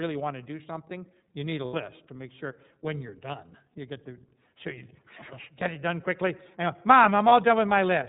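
iLBC codec, throughout the whole clip: the speech is band-limited to nothing above 4 kHz and has a plainly audible rough, slightly synthetic edge. This happens because iLBC codes each frame's excitation on its own, without drawing on the previous frame. The texture fits the 13.33 kbps mode with 30 ms frames, a narrowband VoIP setting that gives up naturalness for robustness.

Lost iLBC frames at 1.65 to 1.74 s and 7.29 to 7.32 s: the first gap falls between "something you need a" and "to make sure when" and lasts 90 ms, which fits three lost 30 ms frames. The second lasts about 30 ms, consistent with a single frame. In each gap the decoder fills in by repeating the last pitch cycle blended with noise, so it sounds like a briefly held, buzzy vowel. Clear speech returns immediately afterwards because every frame decodes independently.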